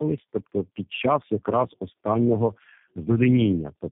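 A short speech recording suffers tandem speech coding from start to finish: the sound is rough, muffled and warbly in a way that points to three low-rate speech coders in a row, fitting a G.729A, AMR-NB, G.729A chain joined by G.711 links. Each coder re-quantises the last one's errors, so artefacts stack. A spectrogram would show nothing above 3.7 kHz, with smeared, blotchy formants and patchy harmonics, while the waveform looks coarse.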